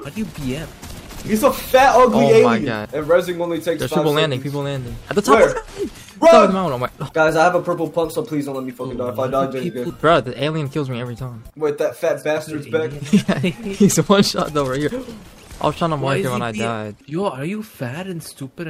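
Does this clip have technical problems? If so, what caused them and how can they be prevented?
Yes: from 7.02 to 8.70 s, a drift correction step plays the sound 5.6% fast, raising pitch about 95 cents. On a spectrogram, harmonics jump upward, then snap back. This is likely clock-matching software resampling in one step. Using a shared clock or gradual rate correction prevents it.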